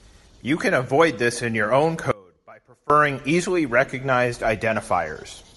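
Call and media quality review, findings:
Breathy, grainy edge on the speech throughout, upper band thinned and noise-filled. Likely Bluetooth LC3 compression at a low bitrate, fitting about 48 kbps and 7.5 ms frames.

Speech cuts out abruptly at 2.11 s and returns at 2.90 s, leaving about 0.79 s of faint residue roughly 25 dB down. Likely an audio dropout to a faint residue, with the path after the break staying live.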